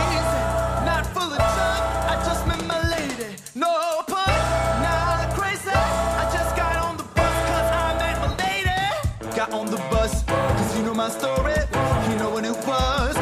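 Nothing here snags the ear at any point, with no technical faults turning up anywhere in the clip.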